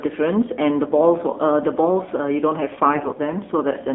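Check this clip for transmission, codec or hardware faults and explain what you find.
Two faults are present: narrowband mobile coding throughout, and a brief burst of corruption near the end.

Across the whole speech clip the sound is thin, boxed-in and audibly buzzy, with nothing above about 3.5 kHz and little below 250 Hz. That is the AMR narrowband mobile codec at work: the voice is rebuilt from a vocal-tract model excited by a few pulses per 5 ms subframe, sampled at 8 kHz. The plainly audible synthetic edge fits one of the lower rates, around 7.4 kbps.

From 2.94 to 3.17 s the voice keeps roughly its pitch and loudness but turns hoarse, scratchy and gargly for about a quarter of a second. These are AMR bit errors: on a weak radio link, some of the less protected bits in each frame were flipped while the checksum on the critical bits still passed. The excitation pulses land in the wrong positions and the fine gain and spectral values drift. 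The span points to roughly a dozen consecutive 20 ms frames hit at an error rate of a few percent.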